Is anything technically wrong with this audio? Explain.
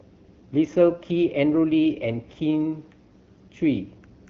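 No, nothing is technically wrong.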